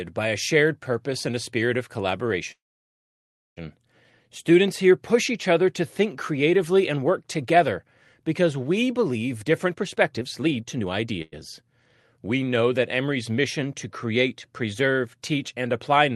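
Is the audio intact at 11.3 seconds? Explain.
No, a call audio freeze runs from 11.22 to 11.34 s: likely late packets emptied the jitter buffer, so about 0.1 s of fading buzz fills in, nothing lost.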